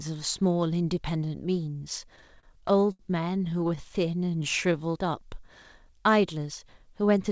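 Between 2.16 and 3.01 s, packets arrived late and the jitter buffer kept running dry, producing repeated stalls (stutter). Across 11 gaps the receiver stretched the last sound for 186 ms in total, the longest hold 75 ms, so nothing is lost but the speech drags and catches. A second run follows from 3.39 to 4.29 s, with 10 shorter gaps of at most 13 ms, 97 ms in all, heard as a lighter stutter.

From 4.36 to 5.07 s, a jitter buffer slow-down builds reserve by repeating pitch periods, adding 72 ms. The speech plays at 91% speed with unchanged pitch, sounding drawn out, all within the call path's 8 kHz top limit.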